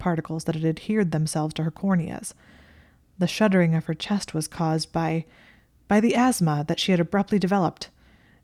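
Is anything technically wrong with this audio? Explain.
No technical faults are audible.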